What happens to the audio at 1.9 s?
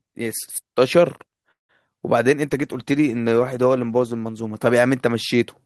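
Around 1.87 to 1.89 s the speech briefly smears, a short wobble where the sound loses its crispness, and a quick consonant at that point may simply vanish. This is short concealed packet loss: about 20 ms of the call arrived too late for the decoder, so the receiver bridged the gap by extending the preceding sound, pitched if voiced or shaped noise if not, then faded back into the real audio. The playback timing shifts slightly earlier afterwards.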